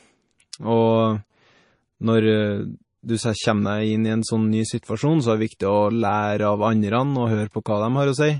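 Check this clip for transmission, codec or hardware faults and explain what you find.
Two codec faults are audible: plainly audible lossy coding throughout the speech, and one pre-echo near the start.

MP3 compression, likely the cause, runs through the whole clip. With too few bits, the encoder discards everything above 10.5 kHz and drops weaker frequency lines that flicker on and off between frames. The damage is plainly audible: the speech sounds dull and watery, with swirly, metallic edges on sibilants. All of this fits a low bitrate of around 32 kbps.

Pre-echo appears at about 0.52 s. A sharp onset lands late in a coding block, and the encoder spreads the quantisation noise meant for the loud part across the whole block, including the quiet stretch before the attack. The result is a brief hiss about 12 ms long just ahead of the onset, which makes the attack sound softened and smeared.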